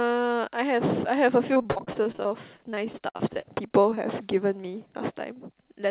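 Repeated packet loss (robotic sound) runs from 1.54 to 4.26 s. Around 25 brief holes, none longer than 50 ms, are each patched by extending the preceding speech, so about a fifth of that stretch turns choppy over the 4 kHz-limited call audio.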